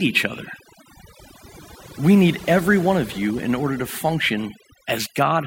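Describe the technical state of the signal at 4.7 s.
At 4.7 s the speech is under overdone noise removal, which runs through the whole clip. The noise reduction is set so hard that any frequency band sitting near its noise estimate is pulled far down or cut, and quiet parts of the voice go with it. The background drops and breaks up into twinkling specks. On a spectrogram this shows as scattered isolated blips in a dark floor, with speech harmonics patchy and gapped.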